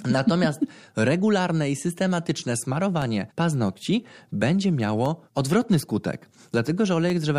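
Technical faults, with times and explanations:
2.0 to 7.1 s, periodic USB or driver dropouts: a background task stalls the USB bus or audio driver every 1.02 s, and each time roughly a millisecond of the speech never arrives and is replaced by silence. Each gap cuts the waveform abruptly, so it sounds like a tiny tick or pop. Because the stall repeats at a fixed interval, the ticks fall with clock-like regularity through this stretch of speech.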